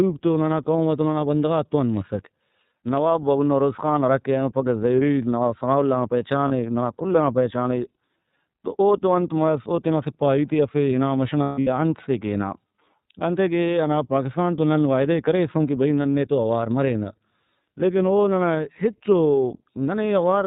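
The whole recording runs through the iLBC codec, a narrowband VoIP coder that encodes each frame's excitation independently, with a 30 ms frame and a sound that fits its 13.33 kbps mode. Because nothing above 4 kHz survives, the speech is band-limited and muffled at the top. The coding damage is plainly audible as a rough, slightly synthetic texture over every syllable.

Lost iLBC frames occur three times. Each time, packets fail to arrive and the decoder fills the hole by repeating the last pitch cycle blended with noise. At 6.48 to 6.52 s, between "ثناءاللہ نا" and "ننا کل ئنا پہچانے", a single 30 ms frame goes missing, leaving a brief buzzy smear. At 11.43 to 11.68 s, after "ہنا مَش" and before "انت سے کہ ہنا", about 210 ms of frames drop out in a scattered cluster. The longest unbroken run is around 150 ms, so the concealment holds a breathy, droning vowel that fades before the speech returns. 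At 16.03 to 16.06 s, between "ئے کریسُن کہ بھئی" and "نے تو اوار مرینہ", another lone 30 ms frame is lost. Since iLBC frames stand alone, the voice is right again almost at once after each gap.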